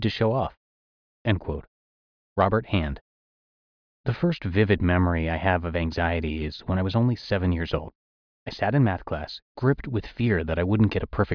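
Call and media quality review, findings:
Nothing stood out on listening to the speech recording, and no findings were logged against the call or media path.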